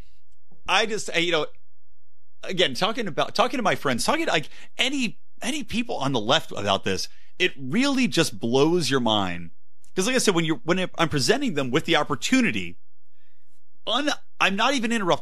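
Speech recording carrying a DC offset from start to finish, the waveform sitting about -30 dBFS off zero; unlike hum or rumble, it's inaudible, showing only as steady energy at exactly 0 Hz.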